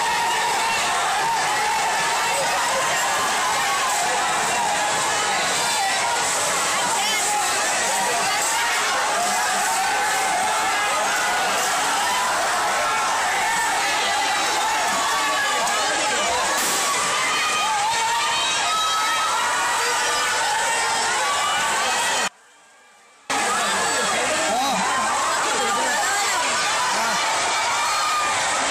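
The sound cuts out abruptly at 22.28 s and returns at 23.30 s, leaving about one second in which only a faint leak of the signal remains, roughly 30 dB below its normal level. This audio dropout to a faint residue was likely caused by a brief loss of the feed while the path after the break stayed live.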